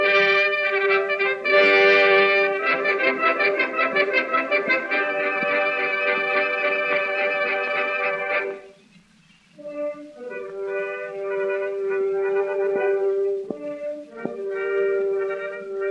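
Nothing is technically wrong with the clip; it is a piece of audio with no fault to place in time or trace to a cause.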